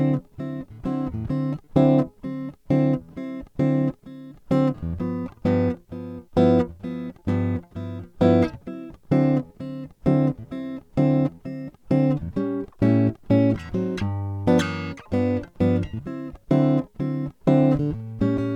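No technical faults can be heard anywhere in this music.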